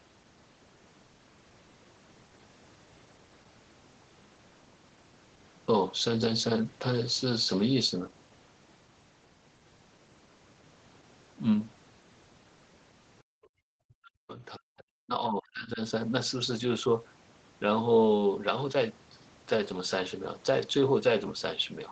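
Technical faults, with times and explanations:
13.23–13.58 s, background gated by the echo canceller: the room sound drops out by about 39 dB, as the canceller clamped the microphone while the loudspeaker played.
13.86–15.8 s, speech suppressed in double talk: the speech dips and breaks up, by around 40 dB, likely the echo canceller muting both talkers at once.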